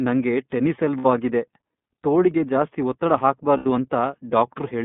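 Throughout, the speech carries iLBC codec coloration. The band is limited to 150 Hz to 3.6 kHz, and the texture is slightly rough and synthetic because each 30 ms frame's excitation is coded independently, which fits the 13.33 kbps mode. The damage is plainly audible.

At 0.98 to 1.06 s and again at 3.57 to 3.67 s, lost iLBC frames take out 60 ms and then 90 ms of audio, consistent with two and three missing frames. The decoder bridges each gap by repeating the last pitch cycle mixed with noise. This gives a brief held, buzzy vowel, and the voice is right again almost immediately afterward.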